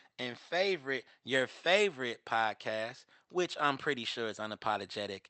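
There are no technical faults to describe in this speech clip, which comes through an Opus call path limited to an 8 kHz bandwidth.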